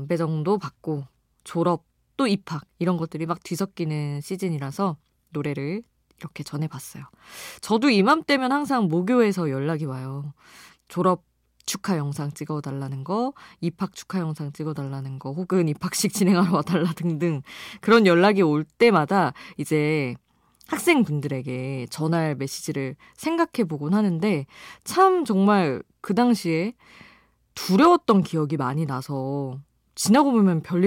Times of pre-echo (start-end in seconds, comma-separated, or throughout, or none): none